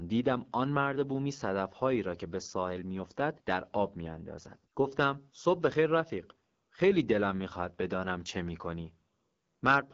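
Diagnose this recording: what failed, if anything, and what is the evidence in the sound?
Codec stage: the speech sounds rough and raspy all the way through, with nothing above about 7.4 kHz. That's the AMR wideband (HD Voice) codec starved of bits, which fits its 8.85 kbit/s mode.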